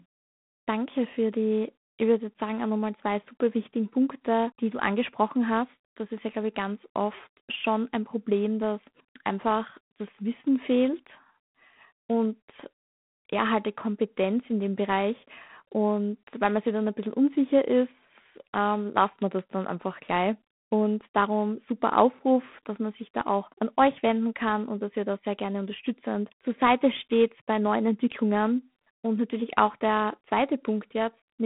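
G.726 ADPCM coding runs throughout this speech recording. A harsh, rasping hiss tracks the speech level, which fits 24 kbit/s, where too few bits per sample code the prediction error. The band spans 150 Hz to 3.5 kHz, with nothing above 3.8 kHz.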